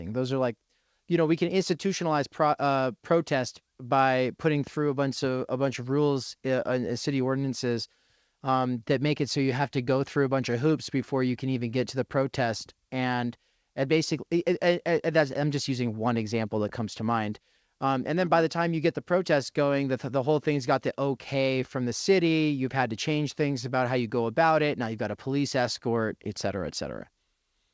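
Nothing stood out on listening to this speech clip, which comes through a call path whose top end stops at about 8 kHz.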